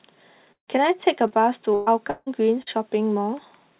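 Speech carried over a narrowband call path with nothing above 4 kHz, which fits G.711 at 64 kbps, has two kinds of gap where audio never arrived and one shorter kind of patched hole. At 0.52 to 0.70 s and again at 2.10 to 2.29 s there is what sounds like a long network dropout, likely a stall in delivery rather than an ordinary lost packet. About 160 ms of audio is missing each time, and the receiver stretches the last sound into a decaying buzz or hiss. In the first gap that fill fades into roughly a tenth of a second of dead silence before speech resumes further on. In the second it runs nearly the whole gap before a brief drop. That trailing silence separates a dropout from a burst of packet loss. The burst of packet loss at 1.74 to 1.89 s loses 120 ms, and concealment covers the entire gap with a held, fading continuation and no silence at all, so it sounds like a smeared continuation rather than a cut. 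Short concealed packet loss at 1.27 to 1.33 s and 2.62 to 2.69 s loses only about 40 ms each time. The gap is bridged by 30 to 40 ms of synthesized continuation that blends back in, so it comes across as a quick smear or wobble.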